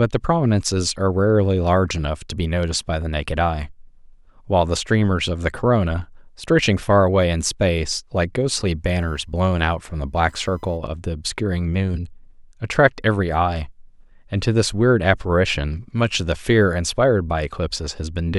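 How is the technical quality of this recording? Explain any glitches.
The recording has one audible glitch, a stretch of computer activity noise in the middle of the speech.

From 8.90 to 10.99 s, a faint buzzing chirp sits roughly 45 dB below the speech. Processor or peripheral load shifts the shared ground of the audio circuit. A spectrogram shows a line near 1 kHz that starts and stops independently of the speech.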